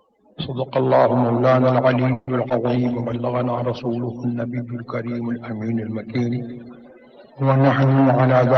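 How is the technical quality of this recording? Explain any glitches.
The recording has four separate glitches, clustered early and at the end.

From 2.13 to 2.29 s the sound stretches into a fading buzz for about 140 ms, then resumes intact; likely a call audio freeze, where delayed packets emptied the jitter buffer.

At 2.49 to 2.52 s a brief smear replaces the audio: short concealed packet loss, with the receiver extending the preceding sound for about 10 ms where 20 ms of audio was lost.

From 2.76 to 4.0 s the audio turns rough and muffled: a call bitrate drop from 32 to 17 kbps forced coarser coding with reduced treble.

From 7.97 s to the end the sound runs about 9% fast at unchanged pitch, as a jitter buffer speed-up trims around 70 ms of excess delay.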